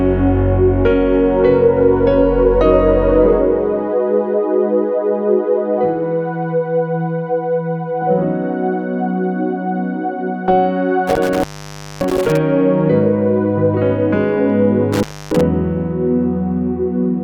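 Intermittent contact occurs at 11.07 to 12.37 s and again at 14.93 to 15.41 s. A loose cable or plug briefly opens the signal path, so the sound drops out for about 575 ms, then about 284 ms, with crackle at each break and faint hiss filling the gap.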